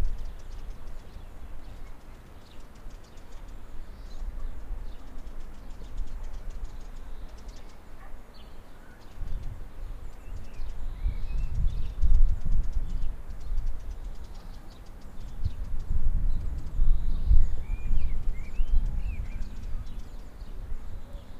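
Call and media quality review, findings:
Block size mismatch (truncated), 0.68–3.22 s: 100 Hz buzz, audio runs about 1.09x fast, pitch near normal. Buffer hand-off between stages; block tails discarded at each 10 ms read. Waveform shows periodic splice discontinuities; spectrogram shows 100 Hz harmonic comb striping.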